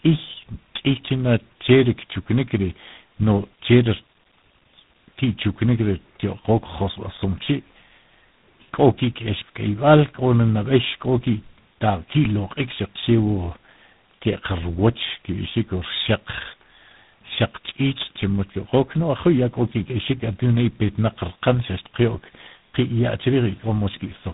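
Tandem speech coding runs throughout this speech recording, which suggests a GSM full-rate leg followed by G.726, each coder reworking the previous one's errors; nothing remains above 3.8 kHz.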